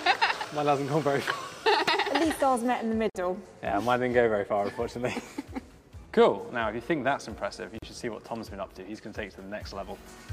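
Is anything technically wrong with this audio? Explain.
Yes. Gaps at joins of encoded pieces appear at 3.10 to 3.15 s (about 50 ms) and 7.78 to 7.82 s (about 40 ms). Separately encoded segments were spliced untrimmed, so encoder start delay and end padding leave brief silences. Continuous sound drops out abruptly and then resumes. Waveform and spectrogram show narrow blank vertical strips with smeared edges.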